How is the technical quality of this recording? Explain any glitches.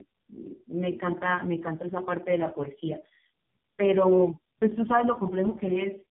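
Poor: the speech is degraded throughout. Tandem speech coding runs the whole clip: three codecs in a row, likely including low-rate AMR-NB, each re-encoding the last one's damage. The result is rough, muffled, warbly speech, and a spectrogram would show smeared harmonics cut off at 3.4 kHz.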